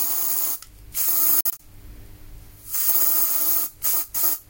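It's a short recording of sounds, and from 1.41 to 1.60 s it keeps cutting out in short silent gaps, about 93 ms lost in all, the longest run 46 ms, with the sound picking up further along. That's likely a Bluetooth dropout.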